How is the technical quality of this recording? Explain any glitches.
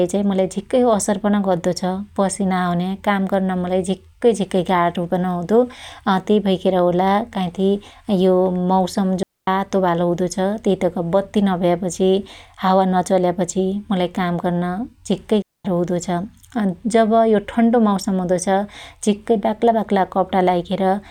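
The recording has two digital wireless dropouts. At 9.23 to 9.47 s, between "यो मौसम" and "बालो हुदो", and at 15.42 to 15.65 s, after "काम गर्न झिक्कै", the receiver lost too much data and muted for roughly 245 ms and 230 ms. Each is a clean, near-silent hole with very quick fades and no noise burst on either side.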